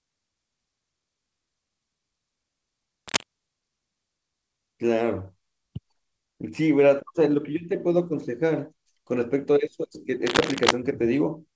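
Cable scratch noise appears at 3.08–3.25 s and again at 10.26–10.71 s: rough, uneven crackling bursts about as loud as the speech, likely from a worn cable or connector being moved.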